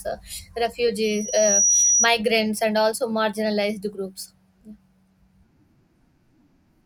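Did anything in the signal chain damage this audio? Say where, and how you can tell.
Yes: loudspeaker feedback squeal in the analogue mic-speaker loop, 1.04 to 2.08 s. The loop gain exceeded one at 5.8 kHz, and that tone swelled over half a second into one bright spectrogram line.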